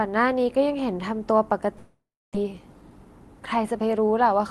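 Long network dropout, 1.77 to 2.37 s: the sound smears into a fading buzz, then about 290 ms of silence, with roughly 400 ms of audio lost, likely from missing packets. Jitter buffer speed-up, 2.44 to 3.94 s: to cut the built-up delay, tiny pitch-period slices are removed, so the speech runs about 110% fast at unchanged pitch, shedding around 150 ms.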